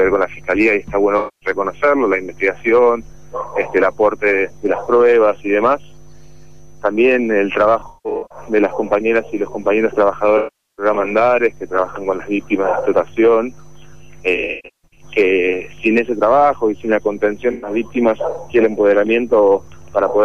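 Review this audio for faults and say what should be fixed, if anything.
AAC frame loss with concealment at 1.18–1.49, 7.79–8.38, 10.37–10.85, 14.36–15.04 and 17.52–17.70 s: the decoder rebuilds missing frames from the last good spectrum, so the sound smears and turns noisy, showing as blurred spectrogram patches and softened waveform detail. Add forward error correction or retransmission to the stream.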